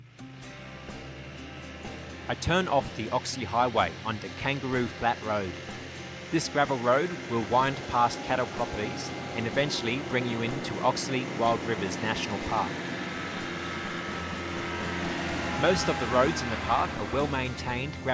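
No faults detected anywhere in the recording.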